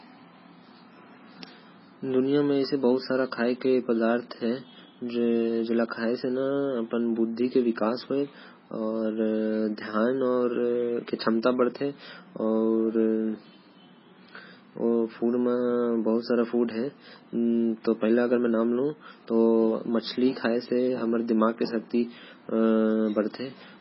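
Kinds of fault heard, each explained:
MP3 compression: The whole clip sounds watery and swirly, with smeared consonant attacks and nothing at all above 5.6 kHz. That's likely heavy low-bitrate MP3 encoding, where the encoder chops the treble and lets weak bands flicker. The damage fits something around 16 kbps.
GSM phone buzz: From 2.17 to 3.26 s there's a hard, raspy buzz at about 217 Hz with lots of harmonics, sitting about 32 dB under the speech. It's a nearby 2G phone's bursts rectified in the audio path, holding steady like an active call.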